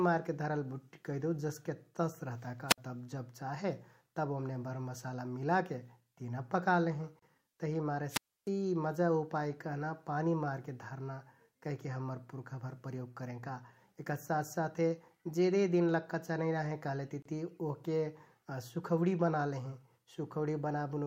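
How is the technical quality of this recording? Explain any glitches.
The speech recording has two kinds of glitch, each heard twice.

A wireless microphone squelch dropout occurs at 2.68 s and again from 8.09 to 8.49 s. The radio signal from the FM transmitter weakens, static rises briefly, and the receiver's squelch mutes the output. The first mute is about 58 ms and the second about 300 ms. Then the sound returns.

A gap at a join of encoded pieces occurs at 7.19 s and 17.22 s, about 10 s apart, each about 31 ms long. Separately encoded segments were joined without removing encoder start delay and final-frame padding, leaving short silences before the sound resumes where it stopped.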